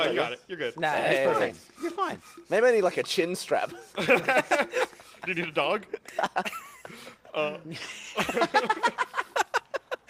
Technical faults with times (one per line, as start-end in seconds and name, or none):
none